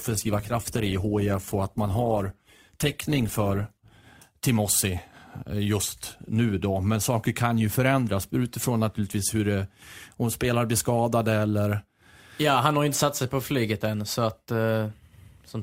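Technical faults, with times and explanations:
0.0 to 4.0 s, adaptive stream starting at a low bitrate: for the first four seconds the speech is dull, with the top end missing and coding artefacts prominent, which fits a low-rate Opus encoding around 16 kbit/s. The player began on a cheap version of the stream to start quickly, then switched to a richer one, consistent with about 64 kbit/s, once it had gauged the connection, so the quality jumps abruptly at 4.0 s without any gap.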